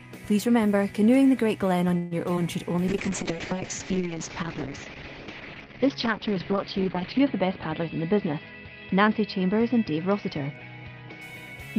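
At 1.97 to 2.13 s the sound stretches into a fading buzz for about 0.14 s and then resumes where it stopped, most likely a call audio freeze from delayed packets: nothing is lost, a gap is inserted. Shortly after, at 2.36 to 2.39 s, a brief smear marks short concealed packet loss. Unlike the freeze, some real audio is missing here, patched with a few milliseconds of continued sound. From 2.90 to 11.28 s a call bitrate drop from 32 to 7 kbps makes the audio rough and muffled. The band shrinks from 20 kHz to 6 kHz and stays at its worst for about 4.3 s, which separates this steady dullness from momentary glitches. From 7.48 to 9.15 s a jitter buffer speed-up plays the audio about 8% faster at unchanged pitch, trimming roughly 150 ms of backlog. Because the pitch stays put, this sounds hurried rather than like a resampling error.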